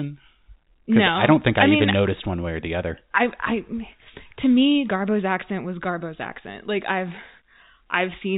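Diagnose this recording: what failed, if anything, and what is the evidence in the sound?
Nothing in the chain has failed: the speech arrives intact through G.711 telephone coding, with the narrow band below 4 kHz and the faint level-following hiss that this coding always leaves, and no dropouts, glitches or distortion beyond that.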